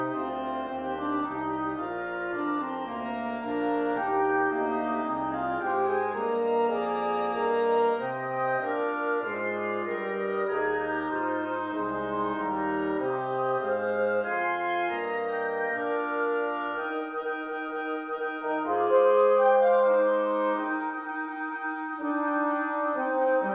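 Nothing is technically wrong with this audio clip.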